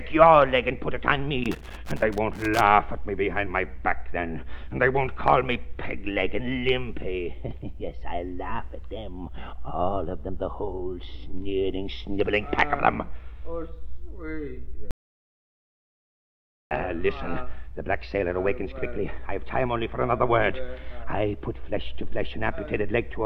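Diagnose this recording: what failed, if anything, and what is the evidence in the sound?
Loose connector crackle sits in the analogue wiring, from 1.44 to 2.61 s. For just over a second the signal breaks into an irregular, scratchy burst rather than a steady noise. That pattern comes from a worn or dirty contact opening and closing as the plug or cable shifts. The signal is chopped at each break, and any DC on the line turns the transitions into pops stacked into crackle.

An audio dropout to silence runs from 14.91 to 16.71 s, a gap of about 1.8 s. The audio cuts off abruptly and returns just as suddenly. In between there is silence, with no room tone or noise floor at all, so the recording chain kept writing silence while the input carried nothing. The likely cause is a lost input link or momentary disconnect upstream of the recorder, and whatever sound occurred in that span is unrecoverable.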